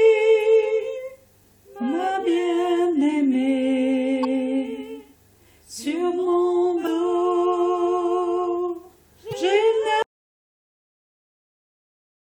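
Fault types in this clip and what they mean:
Damaged data in a compressed stream: corrupted bytes made the decoder misread frames, lose sync and hunt for the next frame header. The result is three brief glitches, at 4.23–4.25 s, 6.83–6.88 s and 9.29–9.33 s, each lasting only a few tens of milliseconds.
Audio dropout to silence: the input signal was lost, likely through a failed link or disconnected source, while recording carried on writing silence. From 10.02 s the sound cuts off mid-flow into silence, with no room tone, and stays silent to the end.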